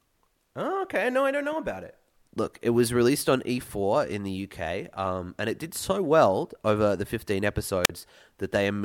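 Right near the end, from 7.84 to 7.90 s, there's a wireless microphone squelch dropout. The radio link from the analogue FM mic weakens for a moment, and as the signal sinks the receiver's squelch slams the output shut. You get a quick lift of hiss, then a hole of near silence lasting about 43 ms, before the speech comes back in.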